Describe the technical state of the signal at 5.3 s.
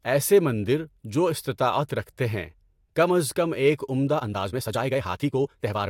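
At 5.3 s the speech is inside a time-stretched section that runs from 4.1 s, right after "کم از کم ایک", to the end of the clip. The pace jumps to about 1.66 times normal, and the audio sounds rushed because short pieces are being dropped to squeeze it, likely by software fitting it to a set length. Unlike a simple speed-up or resampling error, the pitch stays where it was.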